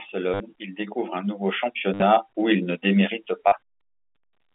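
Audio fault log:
0.34–0.40 s, 1.94–2.02 s and 3.48–3.52 s, packet loss with last packet repeated: each spot is a short robotic stutter that buzzes at about 100 Hz. About 60 ms, 70 ms and 40 ms of audio went missing. The receiver filled each gap by replaying the last packet it had, which fits 10 ms packets. The second gap is broken up across 80 ms, with a longest run of 60 ms. The replayed slices don't join in step with the pitch, and the repeats merge into a buzz. The 200 Hz to 3.6 kHz telephone band of the G.711 line stays audible underneath.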